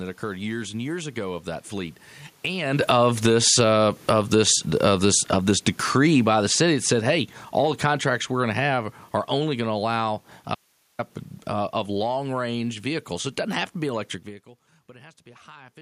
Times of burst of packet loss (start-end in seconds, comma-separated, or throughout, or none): none